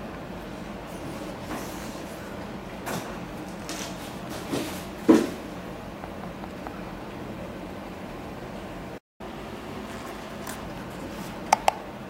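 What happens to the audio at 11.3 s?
Nothing goes wrong at 11.3 s; the audio runs through that moment intact, with no audible fault.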